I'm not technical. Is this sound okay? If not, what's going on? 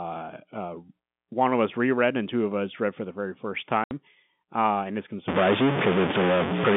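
No. At 3.84 s, packet loss filled with silence: some of the data carrying the speech was lost in transit, so about 70 ms became a sudden hole with hard edges.

From 5.28 s to the end, the sound turns distorted, with noise in the pauses, likely a stuck bit, where one digit of every stored value is frozen.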